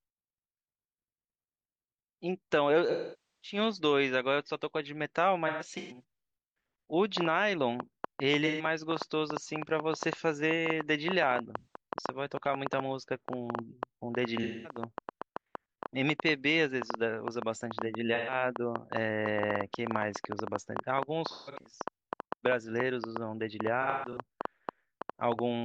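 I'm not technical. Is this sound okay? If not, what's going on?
No. The recording has two faults.

AAC frame loss with concealment: pieces of the compressed stream went missing, and the player patched the gaps with guessed sound. The speech turns smeared and noisy at 2.9 to 3.57 s (the longest gap, about half a second), 5.47 to 6.03 s, 8.46 s, 11.58 s, 14.43 s, 18.14 s, 21.3 to 21.78 s, and 23.8 to 24.2 s.

Train of clicks: from 7.2 s to 25.4 s, uneven ticking runs through the audio about seven times a second, even in pauses. It is likely interference from nearby equipment.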